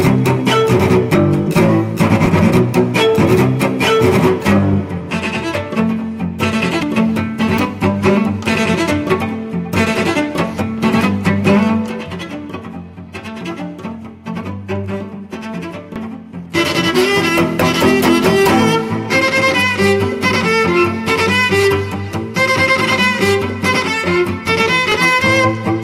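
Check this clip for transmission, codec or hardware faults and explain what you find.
Four abrupt skips occur, at 2.26, 6.83, 15.96 and 24.92 s, each with the sound jumping forward, losing roughly a tenth of a second, a few hundredths at 15.96 s and somewhat more at 24.92 s. This is likely a dropped buffer (overrun), where unread samples were overwritten. Unlike an underrun, no silent gap is inserted.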